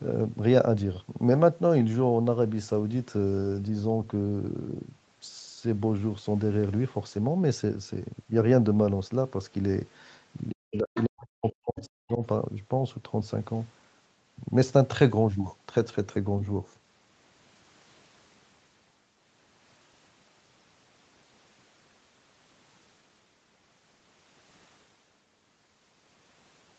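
From 10.54 to 12.2 s the talker's speech sinks by as much as about 40 dB, roughly 1.5 s in all. This is likely speech suppressed in double talk, where the echo canceller ducks the near voice along with the echo. Here the talker disappears, rather than a foreign voice being added.

Inside that stretch, at 10.55 to 10.78 s, 10.94 to 11.04 s and 11.78 to 11.85 s, scraps of a second voice come through. They sit about 15 dB, 15 dB and 25 dB below the speech. This is the other side's voice leaking through, likely loudspeaker echo that the canceller left in the microphone signal.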